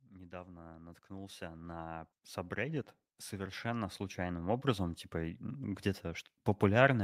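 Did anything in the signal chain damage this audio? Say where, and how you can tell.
Yes. At the call-processing stage, automatic gain rising set in: the gain control judged the incoming speech too quiet and kept pushing its gain upward from 0.1 s to 5.71 s, a climb of about 19 dB. Because the gain acts on the whole signal, the voice and the background noise swell together rather than the speech alone getting clearer. That slow, steady rise in overall level and noise floor over more than five seconds gives the control loop away.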